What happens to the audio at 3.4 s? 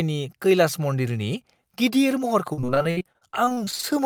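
Repeated packet loss (robotic sound) runs from 2.53 to 3.85 s: eighteen dropouts, each patched by stretching the preceding sound, leave choppy speech with pieces missing.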